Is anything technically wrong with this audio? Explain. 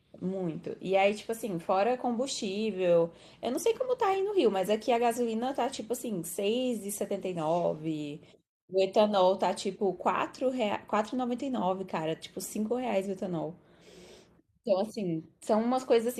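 Yes. There are four lost packets rebuilt from error correction, one at 1.09 to 1.11 s and three at 4.61 to 4.71 s. Each stretch came from a low-bitrate copy sent in the next packet, so the speech has no gap. The 20 ms and 60 ms patches sound briefly rough and noisy.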